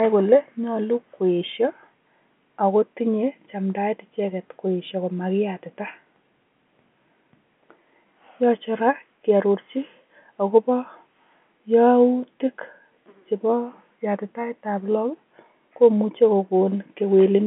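No faults found: the speech occupies the standard telephone band of about 200 Hz to 3.4 kHz with nothing above about 3.7 kHz, which fits ordinary G.711 A-law telephone coding at 64 kbps.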